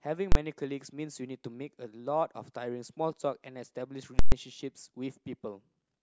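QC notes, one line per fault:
0.32–0.35 s: invalid numbers at full scale. A 32 ms block, consistent with 512 samples, jumps to one extreme value far beyond the speech peaks. It is short enough to be heard as one loud bang.
4.19–4.32 s: invalid numbers at full scale. A calculation produced invalid values, pinning a 128 ms block flat at one extreme value. It is heard as a loud pop at each end with no sound between.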